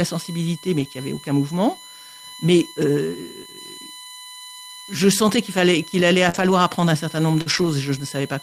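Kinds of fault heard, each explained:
USB whine: Current drawn by the USB bus in 1 ms frames leaks into the audio through power or ground, adding a fixed-pitch whine at 1 kHz and its multiples throughout, strongest at 4 kHz and sitting about 20 dB below the speech.
Lost packet rebuilt from error correction: Packets never arrived, so the decoder played the low-bitrate copies carried in the following packets. This leaves no gap, but sounds rougher and noisier for about 40 ms at 0.79 s, 100 ms from 6.33 s and 120 ms from 7.46 s.
Short concealed packet loss: About 40 ms of audio missed the decoder twice, so it extended the preceding sound and blended back, heard as a brief smear or wobble at 6.29 s, right after "qu'il fallait qu'il allait", and at 7.41 s, right after "apprendre un certain nombre".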